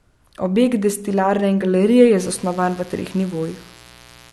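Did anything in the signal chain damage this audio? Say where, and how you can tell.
Yes. A mains buzz enters in the analogue wiring at 2.16 s, right after "destilarne in galerije", and continues to the end of the clip. Its 60 Hz fundamental carries a dense stack of harmonics up into the kilohertz range, sitting around 25 dB below the speech. Sharp switching spikes, twice per mains cycle, leak in from a dimmer, rectifier or poorly shielded run. The raspy, bright edge separates it from plain hum, which stays a smooth, low tone.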